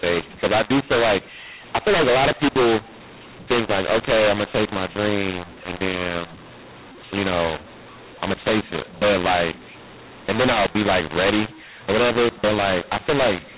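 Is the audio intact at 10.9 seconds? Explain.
No. At 10.9 s, as throughout, mu-law and A-law are mixed up: samples coded with the mu-law curve are decoded with A-law, scrambling levels into harsh distortion. The waveform shows jagged, misscaled peaks; the spectrogram shows broadband noise filling pauses below 4 kHz.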